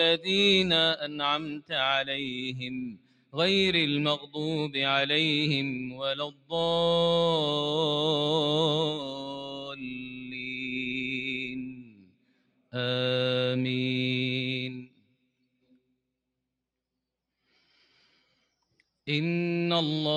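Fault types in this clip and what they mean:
noise suppressor applied to music or sounds: a noise suppressor built for speech stays active across the whole clip, mistaking steady tones and decaying tails for noise, so the level swings by roughly 15 dB and pumps. Unlike a gate, onsets pass while sustains sink.
sound cut by the noise suppressor: particular stretches where held or fading sound is pushed down harder, by up to about 17 dB, the longest from 8.92 to 12.74 s. Unlike a dropout, sharp attacks still come through and the level sinks rather than vanishing.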